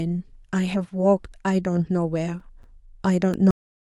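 Starting at about 1.93 s and running to 3.34 s, you get CD scratch ticks: seven little clicks at a steady clip, roughly five a second, each just a few milliseconds long. That regular spacing is the giveaway. A blemish on the disc passes the laser once per revolution and wipes out more data than error correction can rebuild, so the player patches or mutes those samples. Each patch comes through as a tiny tick in the speech.

Then at 3.51 s there's a cut-off end. The speech just stops dead mid-sound and drops straight to digital silence, with no tail or natural decay at all. What happened there is that the final stretch of audio never got written out or played, so the clip ends abruptly instead of finishing the sound.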